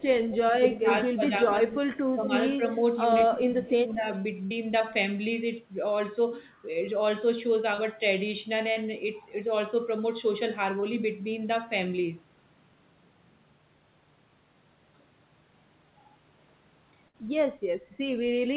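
Speech over a narrowband call path, with nothing above 4 kHz, which fits a G.711-type codec. Two brief echo leaks appear at 0.30–0.37 s and 1.93–1.97 s: a copy of the far-end voice trailing by 185 ms, roughly 15 dB below the speech in the first and much fainter, near 30 dB down, in the second. This is likely loudspeaker pickup that the far side's echo canceller failed to remove. Speech suppressed in double talk shows as dips in the talker's level at 0.59–1.74 s, 2.16–2.25 s and 3.29–4.06 s, reaching about 15 dB in the first and third stretches and only a few dB in the second. The likely cause is an echo canceller turning the near talker down while both sides overlap. Bursts of packet loss at 4.46–4.53 s and 17.08–17.16 s are each heard as a held, fading continuation of the last sound, after which the audio resumes further on with about 40 ms and 60 ms missing. Short concealed packet loss produces brief smears at 7.75–7.80 s, 8.72–8.78 s and 10.80–10.84 s, where 40, 40 and 20 ms of audio went missing and were patched with synthesised continuation. 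From 13.56 to 14.94 s the voice nearly vanishes, dropping about 27 dB to a faint residue, the pattern of one channel inverted so that the common centre content cancels in the mono sum, likely a polarity flip on one side.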